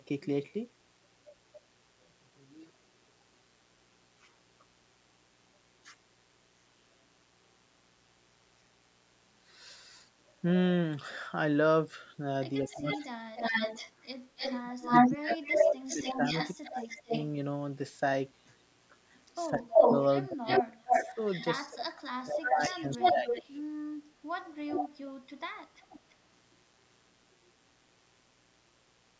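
A steady, raspy mains buzz runs under the whole recording, sitting roughly 40 dB below the speech. Its fundamental is 60 Hz, with a stack of harmonics climbing well above it, which gives it a gritty edge rather than a smooth hum. That comes from sharp switching spikes, twice per mains cycle, getting into the signal path through a dimmer, a rectifier or a missing shield.

From 1.25 to 2.06 s a faint, delayed second copy of the talker trails the original by 224 ms, sitting well down in level. This is echo leak, likely from a far end playing the call over a loudspeaker where the echo canceller failed to remove everything its microphone caught and sent the remainder back.

The echo leak returns much stronger later. From 12.69 to 17.24 s the copy arrives 283 ms late at about the same level as the original speech. From 19.14 to 21.45 s it lags by 307 ms and is slightly louder than the original. 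From 22.39 to 23.64 s it lags by 319 ms at roughly equal level, and from 24.7 to 26.15 s it lags by 330 ms, a little quieter. The delay grows steadily across the clip.

Overlapping these stretches, the talker's own speech dips and drops out in pieces. This is speech suppressed in double talk. From 12.62 to 13.42 s about half a second is pushed down by as much as about 35 dB. From 14.62 to 17.12 s roughly a second and a half sinks by up to about 30 dB. From 19.49 to 23.56 s around two seconds in total fall by up to about 35 dB. The likely cause is an echo canceller that could not tell the local talker from the loudspeaker echo while both sides spoke at once, so it turned both down.

The spectrum stops at 8 kHz. The call's microphone processing has trimmed the lowest bass, which is expected behaviour.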